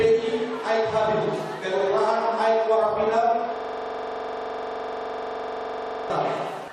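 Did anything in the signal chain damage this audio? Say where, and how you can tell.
Yes, two spots. At 1.8 s there's a short stutter from repeated frames. A 69.7 ms stretch of compressed audio gets played twice, adding 69.7 ms to the file. That points to a hiccup at the codec or storage stage.

The bigger one is a system hang loop from 3.56 s to 6.10 s. A 42.67 ms slice repeats exactly, 59 times, giving a rough buzz at about 23.4 Hz. That fits a 2048-sample ring buffer cycling while the driver stalled.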